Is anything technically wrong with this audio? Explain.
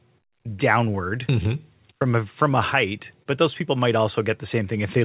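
Yes. Two faults affect this speech clip.

The first is clock drift between sender and receiver, present throughout. The sender's clock runs roughly one percent slow relative to the receiver. The jitter buffer keeps draining, so the receiver has to repeat short pieces to stay fed. This produces small timing hiccups at uneven intervals across the whole clip. There are brief doubled fragments and slight stumbles in the flow of the speech, not one obvious break.

The second is a short stall from a late packet, from 3.23 to 3.28 s. A packet missed its due time and the jitter buffer ran empty. The receiver stretched the last sound for about 27 ms until the packet arrived, then carried on from the same point. Nothing is lost, but playback now sits 27 ms later. It sounds like a sound held slightly too long, with a faint buzz or dip. The call path is band-limited G.711, with nothing above 4 kHz.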